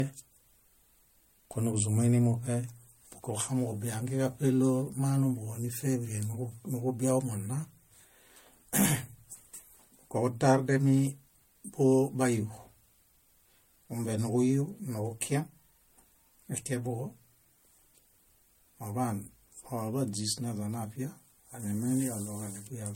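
Throughout, generation loss: swirly, hollow smearing, blurred attacks, nothing above 16.6 kHz, likely from about three MP3 re-encodes near 64 kbit/s.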